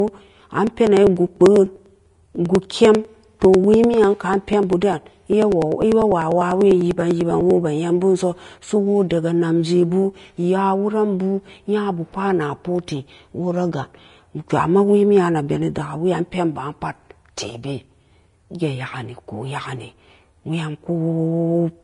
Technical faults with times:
0.00-21.83 low-bitrate audio saved at a high bitrate
0.08-7.50 periodic USB or driver dropouts

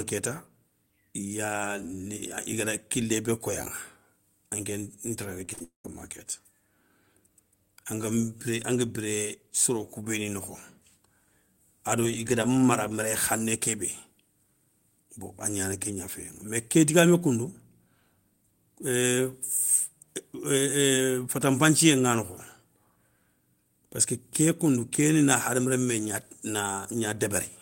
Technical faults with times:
5.45-5.61 repeated packet loss (robotic sound)
5.63-5.85 long network dropout

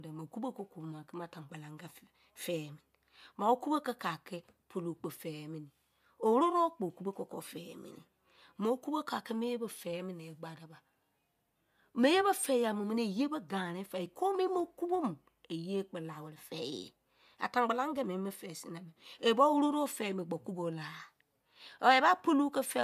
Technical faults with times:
none

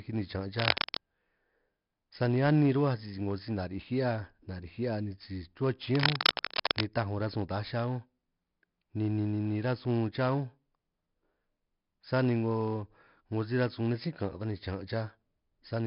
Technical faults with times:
0.00-15.87 4-bit ADPCM compression
0.58-0.97 cable scratch noise
5.91-6.85 cable scratch noise

